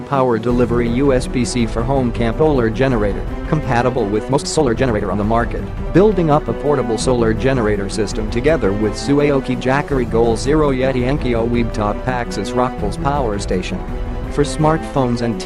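A skip ahead at 2.39 s cuts out roughly a second and a half of the audio, with no fill at all. The material on either side is butted almost directly together, so playback lurches forward instead of pausing. That happens when a stretch is lost in transit, or thrown away by an overfull jitter buffer, while later audio is already queued and ready to play. Jitter buffer speed-up follows from 3.53 to 6.93 s, running at about 119% of normal speed. The receiver's buffer was holding more audio than it wanted, so it trimmed out many short pieces, each one or a few pitch periods long. In total it removed something like 0.7 s of sound. The pitch stays put, but the passage sounds noticeably hurried. A milder round of the same speed-up comes from 11.98 to 12.74 s at about 104%, where only a few tens of milliseconds are shaved off and the quickening is slight.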